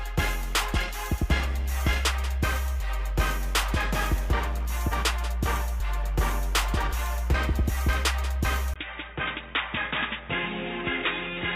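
At 8.74 s the input likely switched to a poorer device: after a 20 ms gap, sound turns dull, cut above 3.8 kHz, about 5 dB quieter.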